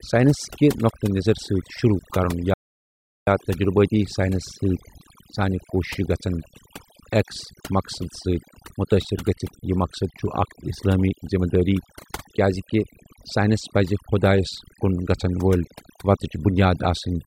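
From start to finish the speech carries overdone noise removal: a noise reducer set too aggressively pulls individual frequency bands down whenever they sit near its noise estimate, so the background drops and breaks up into twinkling specks. Unlike a plain low-pass or band-limited sound, the damage flickers band by band over time.

From 2.54 to 3.27 s there is an audio dropout to silence, a gap of about 0.73 s of silence with no room tone, likely from the input being lost while recording continued. A gate or fade would taper and leave residue; this cuts off abruptly.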